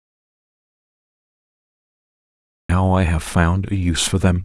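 The speech clip opens in dead silence that is already under way from the first instant and lasts until about 2.69 s, when the sound cuts in abruptly mid-flow. The gap holds no room tone or hiss at all, only silence. It is an audio dropout to silence, likely from the input being lost through a disconnected device, a failed link or a stray mute while the recorder kept writing silence. Whatever was spoken during that stretch is gone.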